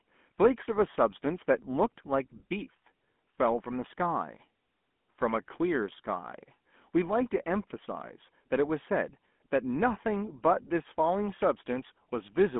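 From start to finish, the speech carries the sound of the GSM full-rate codec. The coder models the vocal tract and drives it with a sparse, regularly spaced pulse train rather than the true excitation. That leaves a buzzy, gravelly roughness on the voice, and it is plainly audible. The band is a phone line's, roughly 200 Hz to 3.4 kHz, with nothing above 3.7 kHz. The texture fits a 13 kbps full-rate stream.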